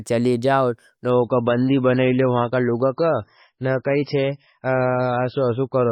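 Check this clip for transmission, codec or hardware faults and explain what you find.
One transmission fault is present: an adaptive stream at a lower bitrate. From 1.10 s, right after "जाओ न", to the end of the clip, the player switched to a much lower-quality version of the stream, as a slowing connection forces. Nothing reaches above 5.6 kHz, so the speech suddenly loses its treble and takes on a dull edge with added codec artefacts, which fits a drop from around 128 kbit/s to about 16 kbit/s MP3. The switch is abrupt but leaves no gap.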